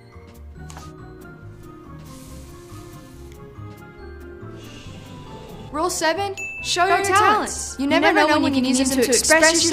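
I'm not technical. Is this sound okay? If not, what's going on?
No. From 6.90 s to the end, the sound has a doubled audio track: a second, equally loud copy trails the original by about a tenth of a second and starts abruptly, likely from the same audio being captured twice through a slower path.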